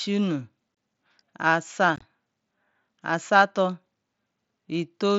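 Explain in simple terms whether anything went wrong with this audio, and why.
Unconcealed Bluetooth headset packet loss cuts holes in the speech at 0.75–0.77 s and again at 1.96–2.02 s. The headset sends speech to the phone in tiny chunks, and some went missing with nothing filling the gaps. The first hole is a single clean drop of about 23 ms. The second is a cluster of short losses over about 60 ms, so it sounds rough and choppy, with abrupt edges that can click.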